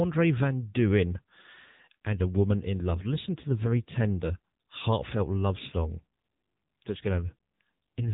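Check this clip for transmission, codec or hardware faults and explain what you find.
The speech throughout the clip has passed through the AMR narrowband mobile codec. The band stops at 3.8 kHz, and the voice has a plainly audible buzzy, synthetic edge. That points to a low AMR-NB mode near 8 kbps, with each 20 ms frame rebuilt from a vocal-tract model driven by sparse pulses. Simple low-pass filtering would dull the sound without this pulse-driven buzz.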